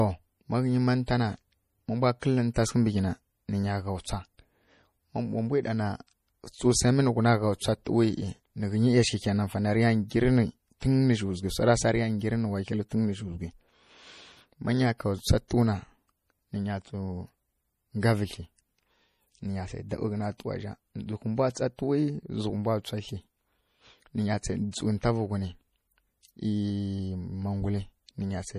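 A speech recording that was likely squeezed through MP3 compression at a bitrate low enough to fit roughly 40 kbps, so the encoder cut everything above 15.1 kHz and dropped weak frequency lines frame by frame, leaving the voice plainly watery and swirly, with metallic chirps on s sounds throughout. Pre-echo occurs where sharp attacks land late in a transform block and the block's quantisation noise spreads backwards into the quiet just before. A short hiss leads the attack at 2.20 to 2.22 s (about 25 ms) and again at 15.48 to 15.51 s (about 27 ms), softening those onsets.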